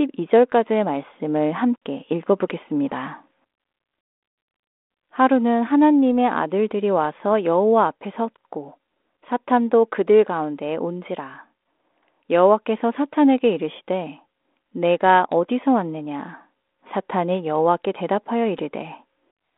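No technical faults are audible.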